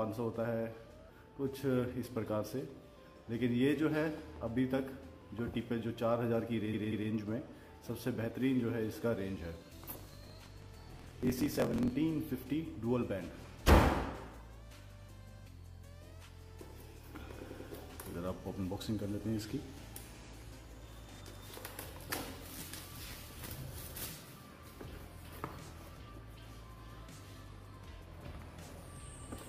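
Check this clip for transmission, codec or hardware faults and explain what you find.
Yes, there are two kinds of fault: three stutters and one stretch of buzzing, hurried sound.

Repeated frames: at 6.69 to 7.06 s a 0.19 s slice plays twice more, adding 0.37 s. At 17.45 to 17.63 s and 20.09 to 20.28 s a 93 ms slice repeats twice, adding 0.19 s each time. A run of compressed frames was sent more than once, so the decoder played the same audio again.

Block size mismatch (truncated): from 9.93 to 11.94 s a 43.1 Hz buzz sits under the sound, which runs about 1.12 times too fast at roughly normal pitch. One stage wrote longer blocks than the next stage read, which fits a 1024-sample read, and the tail of each block was discarded.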